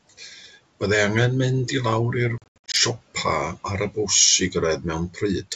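From 0.18 to 0.47 s the noise suppressor cuts into the speech. For about a tenth of a second in total it mistakes soft speech for noise and pulls it down by up to about 9 dB, leaving sounds swallowed and faint. Unlike a dropout, the sound is dimmed rather than gone.

Between 2.38 and 2.76 s there is packet loss on the ADPCM call. About 240 ms of audio is replaced by silence in scattered gaps, the longest 80 ms, which suggests around ten lost packets. Unlike suppression, these holes are hard-edged and fully silent. Each return is slightly distorted while the decoder's predictor and step size fall back into step with the sender's.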